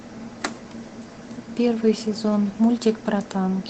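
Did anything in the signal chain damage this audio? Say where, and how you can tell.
No, nothing stood out on listening to this speech, and the call path it passed through did not audibly damage it at any point.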